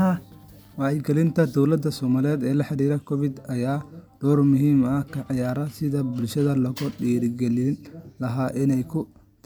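Speech recording with no audible technical fault at any point in the signal.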